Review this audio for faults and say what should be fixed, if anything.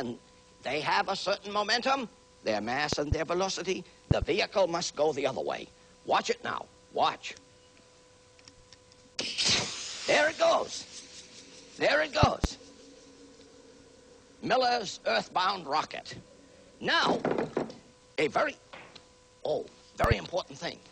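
Loud pops arrive in pairs at 2.93–3.15 s, 4.11–4.25 s, 12.23–12.47 s and 20.04–20.14 s. They peak roughly 15 to 20 dB above the sound, which carries on underneath. Each pair is likely a voltage spike from a plug, switch or static. Secure connections and ground the equipment to prevent them.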